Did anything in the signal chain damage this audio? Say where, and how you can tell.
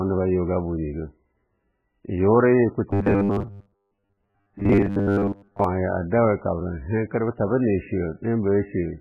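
Yes. At the codec stage the speech is dull and watery the whole way through, likely MP3 compression at a very low bitrate, around 8 kbps.

From 2.91 to 5.64 s there's a robotic sound from repeated short buffers, a rigid 100 Hz buzz, likely a driver or buffer stage looping 10 ms chunks for most of that stretch.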